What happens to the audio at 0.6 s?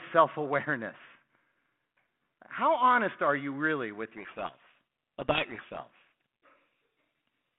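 At 0.6 s the speech comes through intact, carried on a 32 kbit/s G.726 ADPCM telephone path that holds it to roughly the 150 Hz to 3.4 kHz band and adds only a light coding texture.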